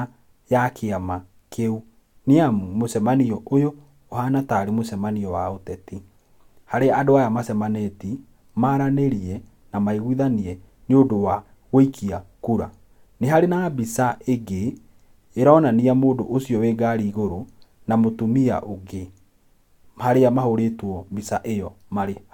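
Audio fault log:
No faults found in the speech recording; nothing to log.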